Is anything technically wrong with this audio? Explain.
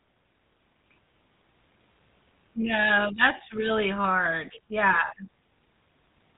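Yes. The speech carries GSM full-rate codec damage from start to finish. The codec models the vocal tract as a filter. It drives that filter with a sparse train of regular pulses, keeping only a fraction of the excitation detail, which fits a 13 kbps stream. Nothing survives above about 3.8 kHz, so the voice sounds narrow and dull. The coarse excitation adds a plainly audible buzzy, gravelly roughness to the voice.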